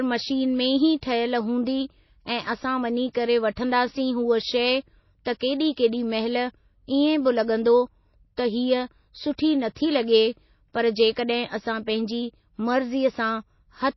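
Throughout the speech, nothing is heard above 5.8 kHz, and the audio has a watery, swirling quality. The likely cause is MP3 compression at a very low bitrate, around 24 kbps. Short of bits, the encoder cuts the treble at a fixed point and drops weak frequency lines that flicker on and off between frames. Unlike a simple low-pass filter, which only dulls the sound, this damage moves and warbles, and s sounds turn metallic.

At 5.25 s, a hiss spreading over about 15 ms comes just ahead of a sharp attack, which then sounds softened. This is pre-echo. The codec spreads its quantisation noise across a whole block, so noise meant for the loud onset also fills the quiet moment before it. It differs from a click or dropout because the noise comes before the transient rather than replacing it, and it is tied to that attack.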